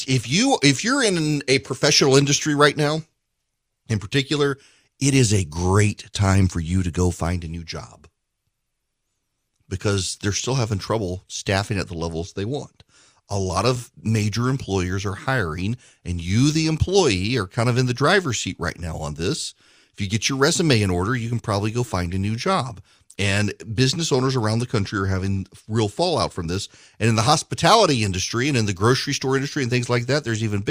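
No technical faults can be heard anywhere in this speech recording.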